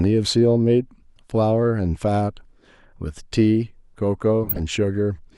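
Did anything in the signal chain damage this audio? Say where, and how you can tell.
Yes. The damage is at the codec stage: a corrupt frame decoded, running from 4.44 to 4.60 s near the end of this speech clip. For about 160 ms a loud glitch breaks in, which fits several consecutive damaged frames, with the error energy reaching close to full scale. Flipped bits in the compressed data made the decoder apply wrong gains and misread codes, so energy landed at the wrong frequencies. On a spectrogram it shows as a blocky smear of misplaced energy, and the waveform shows a sudden high-amplitude patch.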